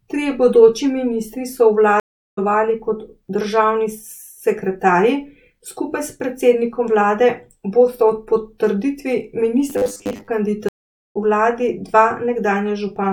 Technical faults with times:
2.00-2.39 stream reconnect
9.70-10.28 robotic sound from repeated short buffers
10.69-11.17 stream reconnect

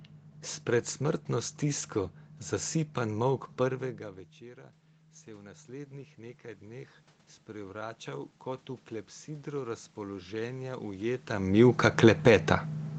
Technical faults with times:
3.80-8.74 automatic gain rising
9.25-11.32 automatic gain rising

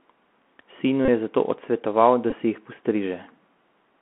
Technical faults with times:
0.00-4.01 Bluetooth CVSD headset codec
1.05-1.08 Bluetooth headset packet repeated
2.30-2.35 Bluetooth headset packet repeated

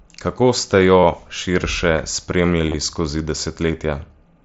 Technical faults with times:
1.00-1.03 concealed Bluetooth headset packet loss
2.67-2.74 concealed Bluetooth headset packet loss

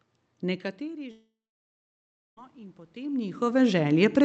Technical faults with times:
0.41-4.24 automatic gain rising
1.11-2.39 long network dropout

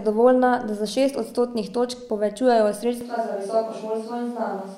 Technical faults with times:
3.01-4.77 switch to a distant microphone

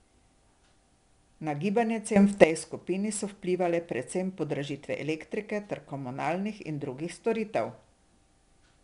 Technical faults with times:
0.00-8.84 4-bit ADPCM compression
2.16-2.44 sudden gain jump

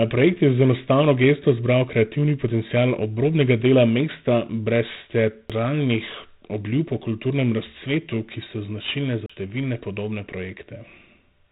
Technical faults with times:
0.00-11.52 4-bit ADPCM compression
5.49 CD skip
9.26-9.30 CD skip

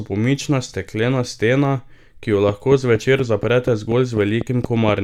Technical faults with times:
2.49-4.90 train of clicks

